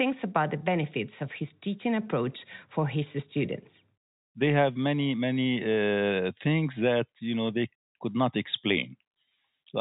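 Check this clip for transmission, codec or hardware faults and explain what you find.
No transmission, codec or hardware faults are audible here.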